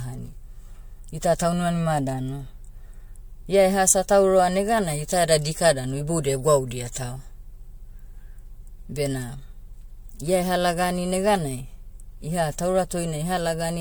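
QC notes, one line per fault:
throughout: generation loss. The speech was likely re-encoded about four times with an MP3-type codec, each pass quantising on a shifted frame grid, so noise and spectral holes accumulate. It sounds swirly, smeared and hollow, with blurred attacks, worse than one pass at around 96 kbit/s would leave.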